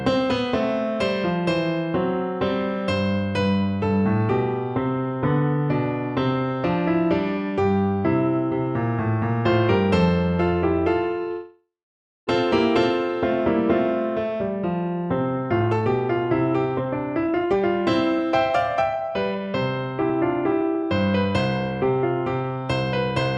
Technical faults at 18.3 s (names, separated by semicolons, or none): jitter buffer speed-up